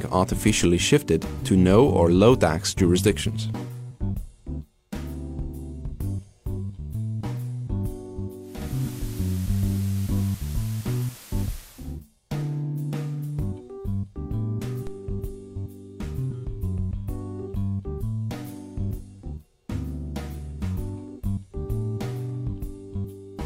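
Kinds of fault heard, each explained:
DC step: the waveform's zero line jumps abruptly at 0.62 s and again at 14.87 s, each heard as a low thump. The offset then drains away as a 5 Hz high-pass lets it decay, while the sound itself carries on unaffected.
Digital radio blending to analogue: from 8.37 s to 12.02 s the receiver loses the digital stream and cross-fades over about 480 ms to the FM broadcast of the same station, and later back. Hiss rises to roughly 20 dB under the signal, with a level shift of about 2 dB.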